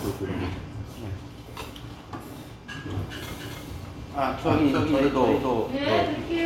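A second, out-of-step copy of the signal, likely from the audio being captured again through a slower path or from an edit that left two copies overlapping, produces a doubled audio track in this recording of sounds from 3.31 s to 5.77 s. The full-band duplicate trails the original by around 300 ms, only about 5 dB quieter, with no decay or room colour. It appears and vanishes abruptly at those times.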